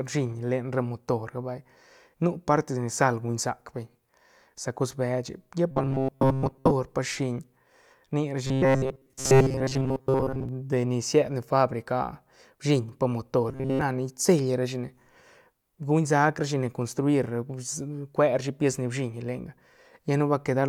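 Speech with robotic sound from repeated short buffers in three spans: 5.71 to 6.72 s, between "beche lla pa" and "pa shiñ"; 8.45 to 10.49 s, ending before "de ni sied ne"; and 13.49 to 13.81 s, after "bshiñ pa". The voice becomes a rigid metallic buzz at 133 Hz, which fits a segment of about 7.5 ms looping in place of most of the real signal, likely from late-arriving audio data.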